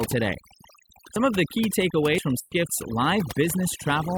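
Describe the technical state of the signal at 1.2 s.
At 1.16 s, a dropped buffer (overrun) is the likely cause: the software apparently failed to read its samples before the hardware overwrote them, so roughly 50 ms vanished and the neighbouring audio was spliced together. The speech jumps forward, with no gap, just before "of the key".

Across this moment, as throughout the clip, overdone noise removal is also at work. The reduction is set so strong that bands near the estimated noise floor are cut away together with the quieter parts of the voice, leaving a lowered background broken into twinkling specks.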